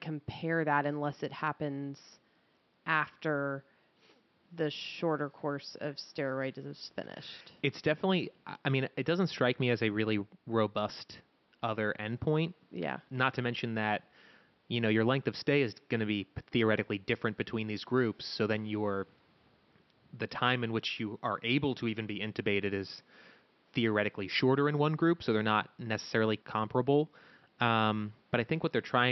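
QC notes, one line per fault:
No faults found; the room background sits about 39 dB below the speech.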